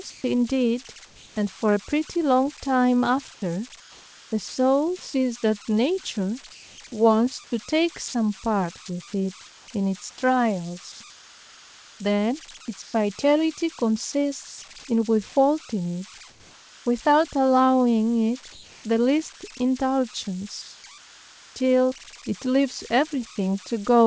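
Converter idle tones run through the whole recording: a tone near 1 kHz, with grainy noise under the quieter sound, sitting only about 19 dB below the speech. A delta-sigma converter working without dither settles into repeating bit patterns when its input is small, and those patterns become an audible tone. Its pitch depends on the input offset, and the tone is heard in the pauses.

Comfort noise in place of the background first appears from 0.10 to 1.36 s. For about 440 ms the natural room background gives way to a smooth, featureless hiss. The sender's voice detector likely judged the pause as silence and stopped transmitting. The receiver then filled the gap with synthetic noise shaped only roughly like the real background, so its texture and detail are lost until transmission resumes.

Sound chopped by the voice detector follows from 3.34 to 5.14 s. The detector likely keeps switching between sending and muting, and about 740 ms in total is swapped for comfort noise. 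Quiet syllables and word edges drop out, which gives the stretch a choppy, gated feel.

Comfort noise in place of the background returns from 6.52 to 8.14 s, covering about 400 ms. Inside that stretch, sound dropped by the voice detector occurs at 8.08 to 8.14 s. About 50 ms of low-level speech was likely taken for background and not sent, so steady noise stands in for it before the speech picks up again once the detector retriggers.

Sound chopped by the voice detector recurs at greater length from 9.46 to 14.62 s. Roughly 1.56 s in total is replaced piecemeal.

Comfort noise in place of the background then fills 16.30 to 16.86 s and 18.52 to 18.84 s. The real background sits about 27 dB below the loud speech, and the synthetic fill drops it by a further 4 dB and 2 dB respectively. A final patch of about 800 ms follows from 20.62 to 21.56 s. All of this passes through a G.722 call path, which leaves nothing above 8 kHz.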